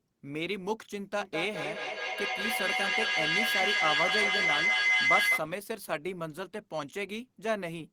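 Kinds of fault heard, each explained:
Feedback howl: Two devices in the same room are joined to one call, so sound from a loudspeaker returns into a microphone and is sent round again, gaining level on each pass. From 1.2 s a tone near 2 kHz builds, pulsing roughly every 200 ms as it circulates, and climbs to about 6 dB above the speech. It holds until the loop is broken at 5.48 s.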